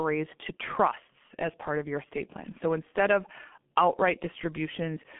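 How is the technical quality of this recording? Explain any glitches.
Poor, with heavy low-rate codec damage throughout the speech. G.723.1 codec artefacts span the whole clip. Its slowly updated, 30 ms-framed voice model smears consonants and leaves the voice hoarse and muffled, consistent with roughly 6 kbit/s. A spectrogram shows energy confined to about 200 Hz to 3.5 kHz, empty above 3.7 kHz, with blurred, blocky harmonics.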